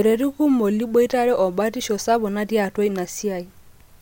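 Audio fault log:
No technical faults can be heard in this speech recording.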